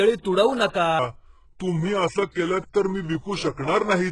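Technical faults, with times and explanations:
Throughout: HE-AAC compression, likely. The upper band sounds synthetic, with gritty, lispy sibilants. The coding damage is heavy, and the treble is rebuilt from copied low bands, which fits a very low bitrate of about 12 kbps.
0.99 s to the end at 4.11 s: section at the wrong speed. The speech suddenly slows to about 0.81 times normal, and its pitch drops by roughly four semitones together with the tempo. It sounds deeper and draggier, likely from playback against the wrong clock.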